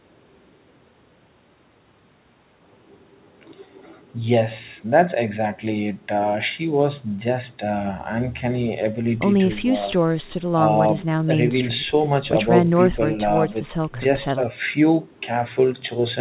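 Nothing stood out on listening to this speech heard over the call path, whose narrow telephone band stops at about 4 kHz.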